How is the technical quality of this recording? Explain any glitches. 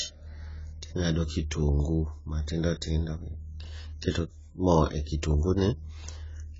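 Poor. The speech carries heavy codec damage from start to finish. Likely AAC compression: nothing reaches above 7.7 kHz, and coarse spectral quantisation, fitting a very low bitrate near 16 kbps, leaves it dull, smeared and fizzy.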